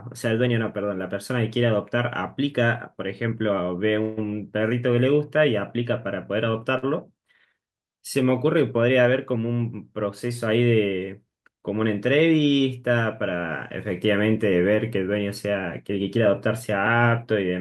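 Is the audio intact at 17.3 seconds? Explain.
No, 17.3 s sits right at the end of a jitter buffer speed-up from 15.89 to 17.33 s. The receiver trimmed about a tenth of a second in pitch-period snips, so the speech runs about 8% fast and sounds hurried without any pitch change.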